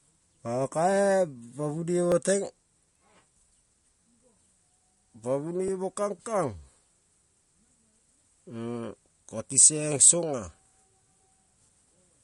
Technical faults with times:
0.00-12.24 MP3 compression
0.34-11.02 clock drift buffer slips

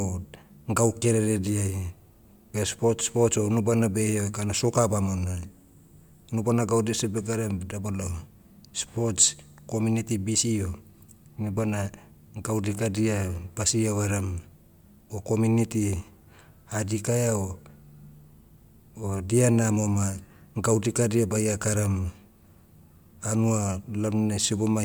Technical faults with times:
none

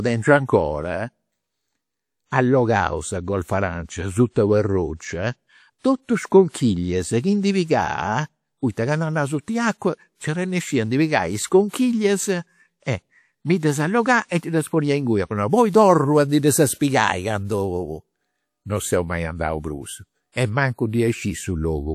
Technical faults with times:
6.49-6.54 pre-echo
11.69-11.73 pre-echo

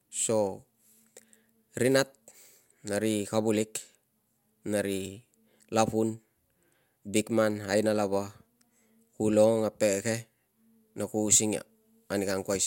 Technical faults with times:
none

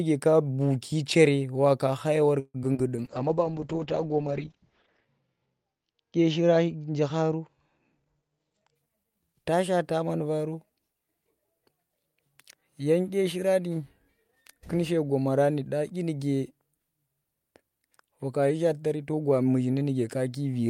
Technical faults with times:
2.39-2.80 repeated packet loss (robotic sound)
2.82-3.09 jitter buffer slow-down
2.97-8.81 call bitrate drop
7.99-9.05 jitter buffer speed-up

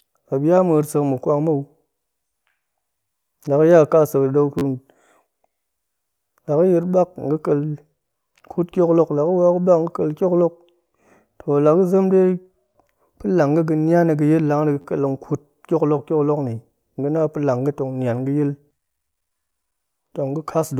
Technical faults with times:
4.59-4.62 repeated buffer
14.81-14.85 repeated buffer

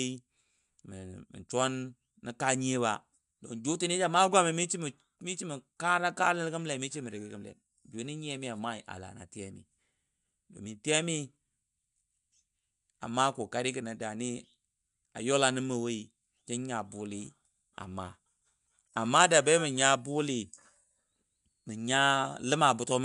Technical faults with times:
none

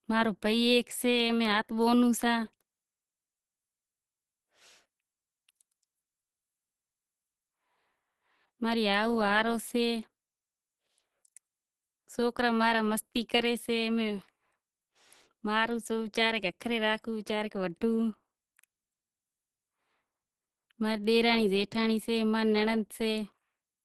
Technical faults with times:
0.00-23.85 Opus compression

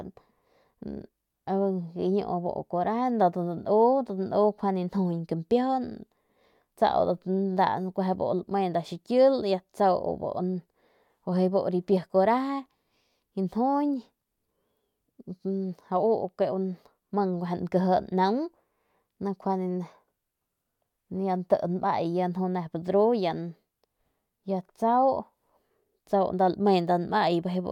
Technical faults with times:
none

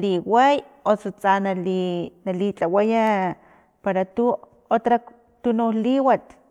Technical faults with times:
none

